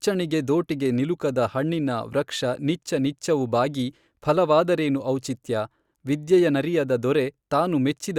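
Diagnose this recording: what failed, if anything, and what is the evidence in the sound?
No fault found in this recording.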